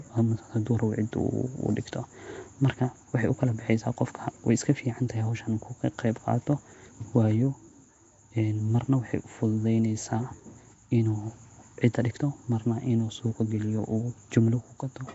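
From start to finish, the speech carries a rough, hissy halo and a smeared, underwater quality. Nothing sounds above 7.7 kHz. The damage is plainly audible. It is likely Nellymoser compression, fitting a 32 kbps stream, with starved bands filled by noise.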